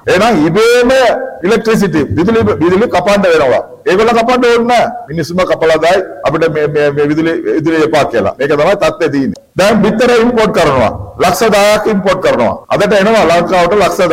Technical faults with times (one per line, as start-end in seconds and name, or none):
none